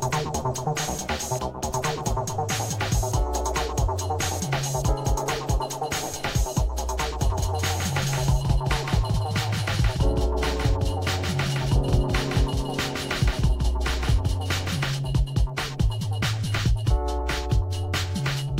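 From 7.3 s to 14.8 s a doubled audio track appears: a second full-band copy trails the original by around 150 ms, a few decibels quieter, with no reverb tail. It is likely a slower capture path or misaligned edit. It switches on and off abruptly, and the waveform shows every transient repeated at that fixed offset.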